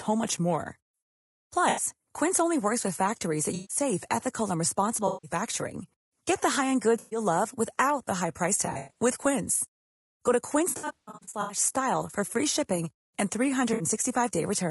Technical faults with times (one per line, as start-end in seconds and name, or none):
0.00-14.71 low-delay AAC compression
1.69-1.82 AAC frame loss with concealment
3.55-3.77 AAC frame loss with concealment
5.07-5.31 AAC frame loss with concealment
6.99-7.19 AAC frame loss with concealment
8.65-9.00 AAC frame loss with concealment
10.69-11.57 AAC frame loss with concealment
13.73-13.83 AAC frame loss with concealment